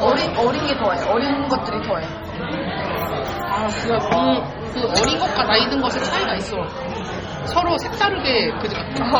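Throughout, the sound turns watery and swirly with smeared attacks, likely from heavy MP3 compression near 32 kbps; a spectrogram shows flickering, patchy high-frequency bands, empty above 21.1 kHz.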